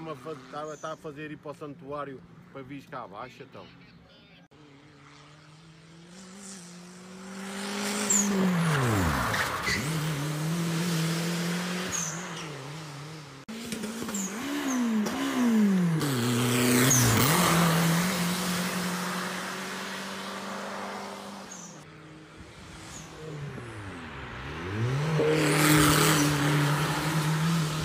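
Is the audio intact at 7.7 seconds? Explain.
No, 7.7 seconds falls inside a time-stretched section running from about 6.01 to 9.13 s. Across that stretch the pace jumps to roughly 1.72 times normal while the pitch holds steady, so it sounds rushed rather than chipmunky. That's most likely software squeezing the passage to fit a shorter length, keeping pitch by dropping little slices of audio and butting the remaining pieces together.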